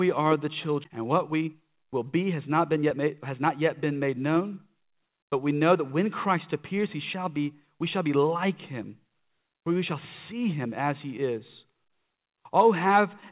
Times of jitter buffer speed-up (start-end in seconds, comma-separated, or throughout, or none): 0.98-5.18